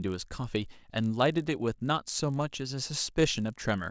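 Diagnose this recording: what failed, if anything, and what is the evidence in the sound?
Sample-rate conversion stage: a resampler restarted on every block, so each 20 ms block edge carries an error, heard throughout as a 50 Hz buzz only while speech is present.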